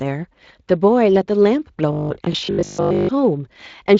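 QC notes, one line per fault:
1.93–3.13 s, robotic sound from repeated short buffers: fresh audio is likely arriving too seldom, so playback fills the gaps by looping the most recent 20 ms stretch while the real signal is dropped. Roughly 70% of this span is repeats, and the fixed loop length stamps a rigid 50 Hz buzz onto the speech, leaving a hard, metallic drone that only loosely tracks the syllables, heard over the light Speex coding around it.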